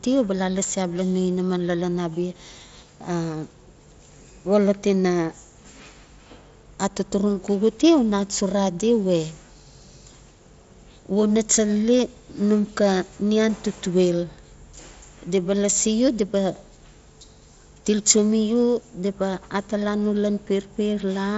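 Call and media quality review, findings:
Call and media quality review, findings: no faults found in this speech clip carried over the Bluetooth mSBC headset link.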